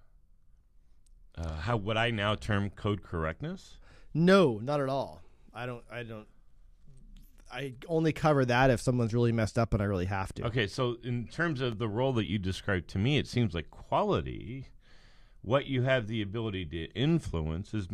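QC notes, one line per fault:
11.72 s block of digital silence: output buffer likely not filled in time, about 2.9 ms zeroed (fits a 128-sample buffer) between "so in terms" and "the role that you", heard as a tick.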